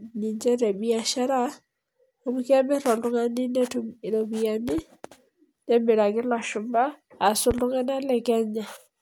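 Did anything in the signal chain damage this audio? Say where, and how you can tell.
Yes, two loud pops, each a quick double about 10 dB above the speech at 4.69–4.81 s and 7.51–7.61 s. That's likely voltage spikes in the analogue wiring.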